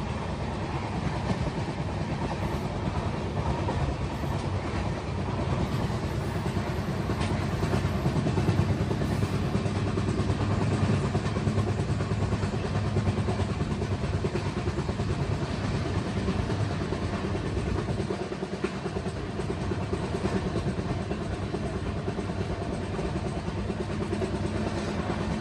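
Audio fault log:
No faults detected.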